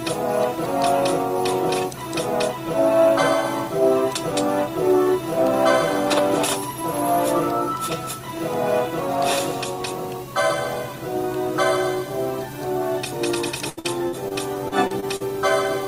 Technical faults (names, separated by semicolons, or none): repeated packet loss (robotic sound)